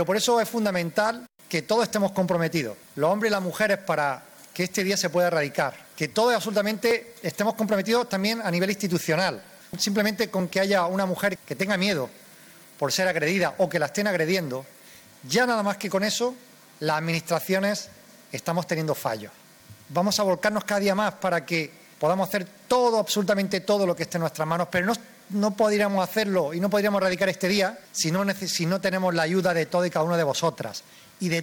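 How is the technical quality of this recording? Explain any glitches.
The recording has two brief glitches, at 6.91 s and 15.91 s. A dropped buffer (overrun) is the likely cause: the software fell behind and the hardware overwrote roughly 10 ms of samples, so the audio splices straight across, giving a skip forward in the sound.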